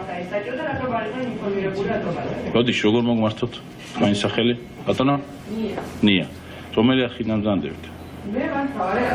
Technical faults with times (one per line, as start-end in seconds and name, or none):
5.11-5.18 short stall from a late packet